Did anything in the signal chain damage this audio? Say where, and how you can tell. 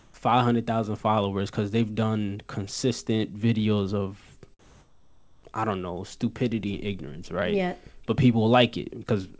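Yes. In call processing, the sender's discontinuous transmission likely cut the stream during pauses, and the receiver filled them with comfort noise in place of the background at 0.00–0.14 s and 4.59–5.43 s, after "done consistent videos of". The real room tone becomes flat, featureless hiss, shifting level by about 3 dB and 6 dB.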